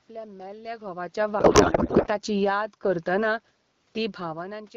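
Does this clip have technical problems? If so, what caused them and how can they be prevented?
Yes. From 1.13 s to 3.26 s, automatic gain falling lowers the level by about 4 dB. The room noise sinks along with the speech, which is what separates it from a talker moving away. Prevention: set input levels so the gain control isn't triggered by loud onsets, or give it a slower, gentler attack.

From 1.39 s to 2.07 s, a codec payload misread replaces the speech with garbled warble that barely tracks it. This continuous garble, rather than gaps or repeats, rules out packet loss, and the sound points to octet-aligned AMR being decoded as bandwidth-efficient. Prevention: make sure both ends negotiate and use the same AMR payload format.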